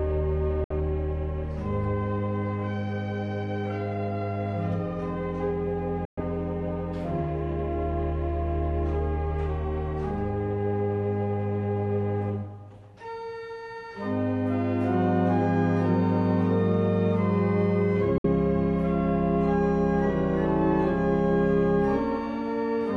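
At 0.64, 6.05 and 18.18 s the sound cuts abruptly to silence for about 61, 122 and 61 ms, then resumes further along. Late packets discarded in a Bluetooth dropout are the likely cause. Waveform and spectrogram show sharp-edged, full-band blank gaps.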